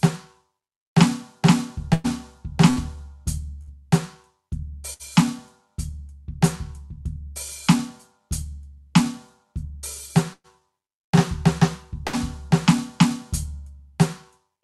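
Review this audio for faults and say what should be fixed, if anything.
Burst of packet loss occurs at 1.93–2.07, 2.70–2.79, 3.62–3.70, 4.93–5.02, 10.33–10.62 and 12.07–12.16 s. Each time, about 60 ms of music is lost. The receiver extends the last sound and fades it over 56–107 ms, heard as a held buzz or fading hiss before playback resumes further along. At 10.33 s there is also a 50 ms silence. Fix with forward error correction or redundancy on the link, and a steadier network path.

Jitter buffer speed-up runs from 9.44 to 9.82 s at 113% speed. After delayed packets arrive together, the buffer trims roughly 70 ms in pitch-period pieces, so the music hurries at unchanged pitch and the tempo briefly wavers. Fix by smoothing network jitter so the buffer stays near its target depth.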